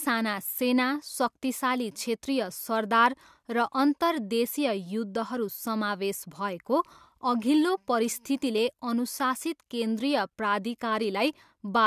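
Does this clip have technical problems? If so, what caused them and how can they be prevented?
No, nothing in this speech recording stood out as a technical problem on listening, so there is no cause to trace and nothing to prevent.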